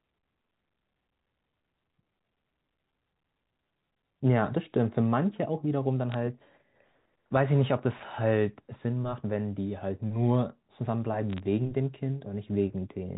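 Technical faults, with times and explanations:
6.12–6.14 s and 11.30–11.40 s, bit errors on a digital phone line: short bursts of sharp ticks and crackle over the G.711 A-law speech, as a few bits in a thousand flip and corrupt individual samples.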